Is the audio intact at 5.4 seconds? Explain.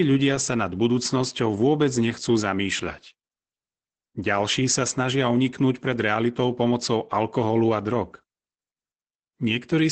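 No. At 5.4 s the speech sounds muffled, slightly hoarse and robotic, with nothing above 8.7 kHz, as it does throughout. This is Opus voice compression: the SILK coder limits the band to wideband and codes the excitation coarsely, which fits a bitrate around 12 kbps.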